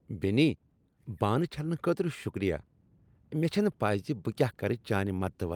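Nothing technical stands out here: it's a short speech recording with no audible faults anywhere along the way.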